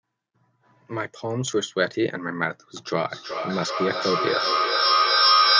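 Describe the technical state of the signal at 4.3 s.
At 4.3 s you're right in the middle of a feedback echo between two devices, which runs from 3.05 s to the end at 5.59 s. Two devices on the same call are sharing a room, so one speaker replays the other's mic and that mic catches it again. Neither echo canceller touches the other's output. The speech comes back roughly every 0.4 s, thinner and ringier each pass, and it's building rather than fading, peaking about 6 dB above the speech itself.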